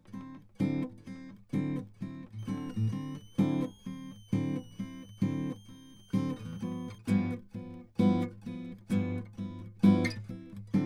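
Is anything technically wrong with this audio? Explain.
Yes. From 2.39 to 6.98 s a switching supply whistle sits behind the music, a thin tone around 3 kHz, roughly 30 dB below it, that wanders between 2.8 and 3.3 kHz. A power converter is cycling at an audible rate that shifts with load, which sets it apart from steady mains hum, whose pitch stays fixed and low.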